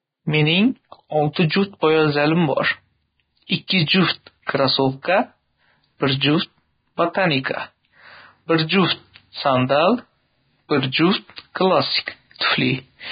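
Throughout the speech, the treble is hissy and grainy, nothing survives above 4.9 kHz, and the tone sounds roughened. The heavy damage fits a very low bitrate near 16 kbps, most likely Vorbis compression quantising the residue so coarsely that fine detail becomes noise.

A short hiss comes just before sharp onsets at 3.67 to 3.70 s (28 ms), 4.46 to 4.49 s (27 ms) and 12.06 s (17 ms), blurring each attack. This is pre-echo: quantisation noise sized for the loud onset spreads back across the quieter start of its transform block.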